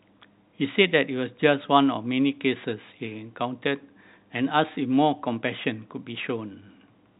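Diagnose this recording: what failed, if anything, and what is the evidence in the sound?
Nothing in the speech points to a failure at any stage: it carries the expected character of G.711 telephone coding, with its band ending near 3.8 kHz in a way that fits a 64 kbps mu-law line, and no audible disturbance beyond that.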